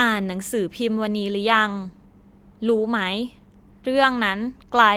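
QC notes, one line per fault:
No faults heard anywhere in the speech.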